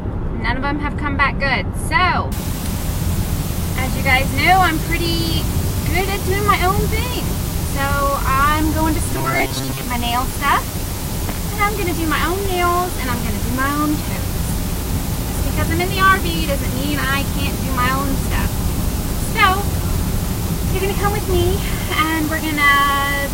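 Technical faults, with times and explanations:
2.32–23.33 s: low bit depth with dither. The audio is reduced to 5 bits with dither, leaving a steady, even hiss about 10 dB below the signal, without distortion.
9.12–9.83 s: robotic sound from repeated short buffers. A rigid metallic buzz at 134 Hz, likely from a roughly 7.5 ms buffer being repeated, with about half the audio replaced.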